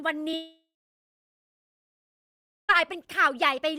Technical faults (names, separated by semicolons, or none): short concealed packet loss; long network dropout